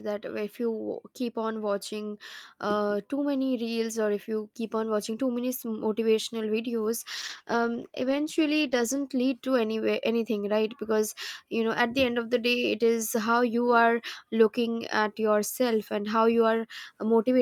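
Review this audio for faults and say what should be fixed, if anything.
Call bitrate drop, 7.19 to 9.13 s, ending just before "lead to anywhere anything". For nearly two seconds the speech turns coarse and dull, with the upper frequencies shaved away, which fits the encoder falling from about 64 kbps to roughly 15 kbps for about 1.88 s. When the call's bandwidth estimate sank, the encoder spent far fewer bits per frame and dropped the high band, so the detail came back only once the rate recovered. To prevent it, give the link steadier headroom and set a higher minimum bitrate floor so a brief estimate dip cannot starve the encoder.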